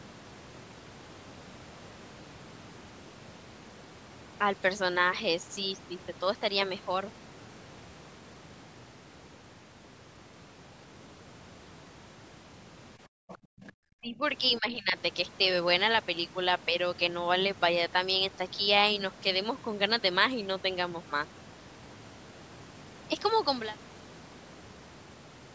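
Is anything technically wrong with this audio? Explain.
Yes, there are echo-canceller faults clustered between 13 and 15 seconds in this speech.

Background gated by the echo canceller, 13.08 to 13.73 s: while the far end was playing through the loudspeaker, the canceller clamped the microphone hard to keep echo out. The room sound underneath drops away by as much as about 38 dB, for roughly half a second in total across that span, then returns once the canceller releases its grip.

Other side's voice leaking through, at 13.29 to 13.38 s and 13.67 to 13.71 s: the far-end talker was likely played on the loudspeaker and not fully cancelled before reaching the microphone. Two brief scraps of a second voice come through, sitting well under the main talker, about 20 dB down in the first and a little quieter in the second. They are short, heard inside the gated stretch.

Speech suppressed in double talk, at 14.01 to 14.22 s and 14.59 to 14.97 s: both sides were speaking at once, and the canceller, likely unable to tell its own talker from the loudspeaker echo, turned everything down. 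The talker's voice sags by around 10 dB in the first dip and nearer 15 dB in the second, roughly half a second affected overall, audible as the voice briefly pulling back.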